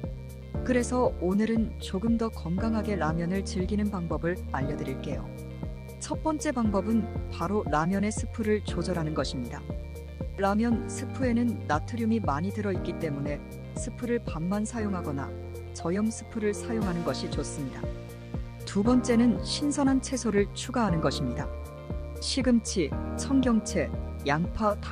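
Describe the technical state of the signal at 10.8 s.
At 10.8 s a steady mains buzz sits under the sound, as it does throughout. Switching spikes on the 60 Hz supply add raspy harmonics, well below the main signal.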